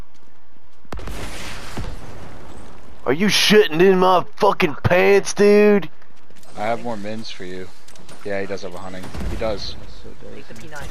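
A DC offset runs through the entire clip: the waveform sits shifted from zero by a constant of about -23 dBFS. It is inaudible as such, but it eats headroom on one side and appears as steady energy at the very bottom of the spectrum.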